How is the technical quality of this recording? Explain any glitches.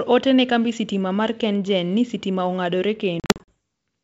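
There's one real problem, near the end: packet loss on an ADPCM call, between about 3.20 and 3.49 s. The wideband G.722 coding at 64 kbit/s underneath keeps the speech bright up toward 7 kHz, with at most a faint hiss up top.

Across that 280 ms stretch, around 180 ms of audio drops out as a burst of hard-edged silent gaps, the longest about 40 ms. That's roughly ten packets gone. Because ADPCM sends changes rather than absolute samples, each hole knocks the receiver's predictor and step size out of line with the sender's. So every time the speech resumes, it comes back with a click, a jump in level or a bit of grit, and then settles over the next few tens of milliseconds.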